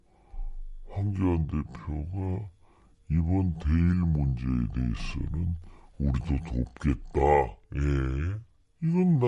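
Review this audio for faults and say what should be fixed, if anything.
Throughout the clip the speech sounds low and sluggish, running at about two-thirds of normal speed with the pitch dropped by about 7 semitones. That is a wrong sample rate: the samples are played back too slowly without conversion, which fits 48 kHz audio played at 32 kHz. To prevent it, match the playback rate to the file's recorded rate or resample before playback.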